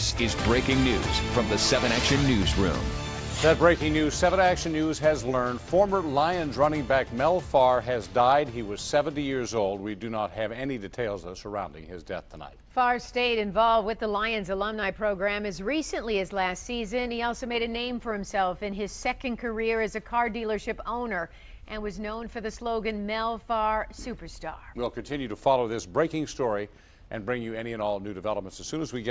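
No technical faults can be heard anywhere in this clip.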